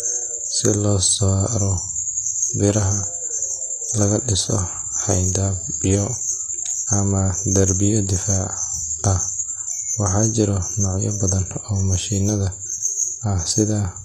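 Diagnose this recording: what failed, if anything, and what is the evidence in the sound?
The fault is at the codec stage. Throughout the speech, s sounds are gritty and lispy with a metallic sheen, yet the treble stays bright. That points to likely HE-AAC compression at around 24 kbps, where treble is copied up from lower bands. A plain low-bitrate codec would sound dull instead.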